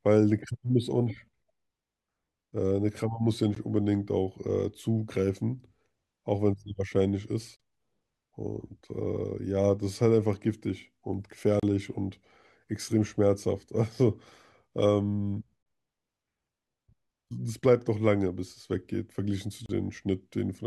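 At 3.55 s the speech drops out for about 15 ms. Similar gaps follow at 7.56 to 7.60 s, 11.60 to 11.63 s, 15.63 to 15.66 s and 19.66 to 19.69 s, each about 32 ms. They repeat every 4 s. Each is a gap at a join of encoded pieces. The audio was encoded in separate blocks and joined untrimmed. The encoder's start-up silence and its padded final frame remain. The result is a hole with smeared edges. The speech then resumes where it stopped.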